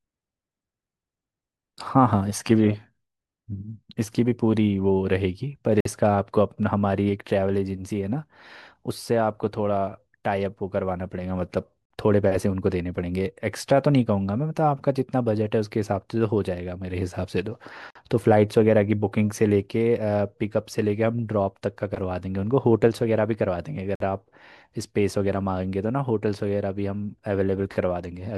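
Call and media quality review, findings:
Gap between chunks: short silent holes in the speech at 5.80, 11.85, 17.90 and 23.95 s, each 50 ms, recurring every 6 s. No audio is missing, only pushed back at each join. Probable component: chunked transport or playback. Each 6 s segment is followed by 50 ms of dead air, consistent with codec padding at segment boundaries or a player starting each chunk late. Regular spacing points to the chunking stage.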